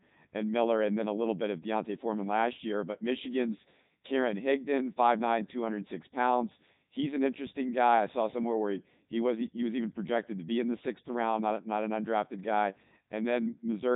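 From start to finish the speech passes through a Codec 2 vocoder at 3.2 kbit/s, resynthesised from pitch and spectral envelope, sounding heavily robotic and buzzy, with nothing above 3.8 kHz.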